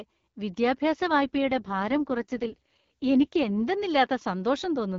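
From 1.08 s to 3.60 s an AMR rate drop sets in: the speech turns rough and raspy, which fits the AMR-WB codec falling from about 12.65 to 6.6 kbit/s to free bits for error protection. Bandwidth holds steady, with no gap, and clearer wideband speech returns afterwards.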